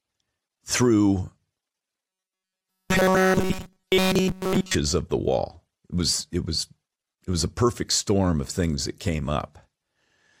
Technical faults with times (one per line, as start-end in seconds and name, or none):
2.08-4.75 robotic sound from repeated short buffers